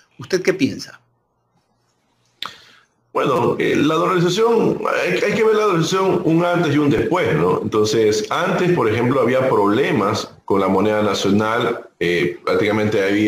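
Two short repeated-buffer glitches turn up in the audio. At 3.36 to 3.38 s a tiny slice of about 5.8 ms plays five times in a row, so you get a brief buzzy stutter, and at 6.98 s a single repeat makes a small click. New audio just didn't arrive in time, so the device replayed its last buffer. The slice length fits a 256-sample buffer, and roughly 20 ms and a few ms of audio are lost.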